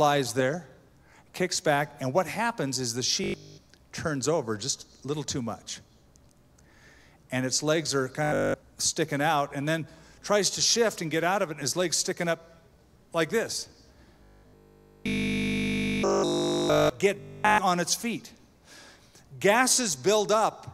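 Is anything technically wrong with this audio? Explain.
Yes. Robotic sound from repeated short buffers appears at 3.24–3.58 s, 8.24–8.54 s, 14.24–16.90 s and 17.16–17.58 s. The longest stretch is the third. The sound turns into a rigid, metallic buzz at 50 Hz. The likely cause is audio arriving too late, so the player loops a 20 ms fragment in place of the missing material. Nearly all of the underlying audio is lost in those spans.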